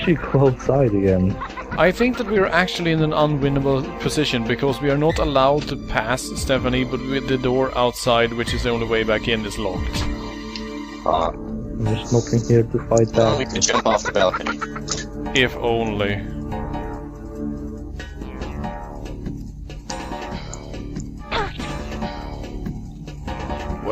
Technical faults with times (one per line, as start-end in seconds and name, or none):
none